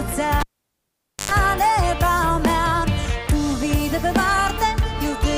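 At 0.40 s a cable pulled and plugged in breaks the signal chain: a pop as the live plug leaves the socket, then about 0.86 s of near silence. On reinsertion, the tip alone makes contact first, letting a roughly 0.10 s burst of 50 Hz mains buzz through until the connection seats with a second pop at 1.31 s. That hum burst and the paired pops separate it from a plain digital dropout, which cuts in and out cleanly.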